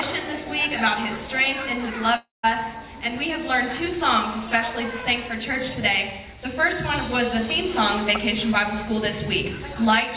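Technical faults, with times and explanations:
2.16–2.45 s, long network dropout: the sound smears into a fading buzz, drops to near silence for about 0.17 s, then resumes with that stretch missing, likely from packets that never arrived.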